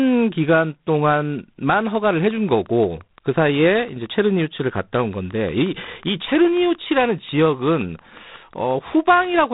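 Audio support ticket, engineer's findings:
Speech runs narrowband the whole way through, with nothing above 3.8 kHz, and there's a harsh, rasping hiss riding on it that swells and drops with the level. That's G.726 ADPCM. Each sample only codes a few bits of difference against an adaptive prediction, so quantisation noise tracks the signal. The roughness fits 24 kbit/s.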